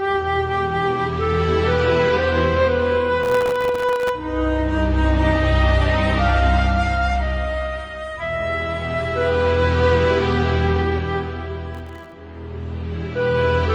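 Processor overload crackle runs from 3.23 to 4.09 s and again from 11.75 to 12.12 s. The audio breaks into gritty crackle as dozens of sub-millisecond buffers miss their deadlines and drop to silence, each hard-edged gap clicking until the load eases.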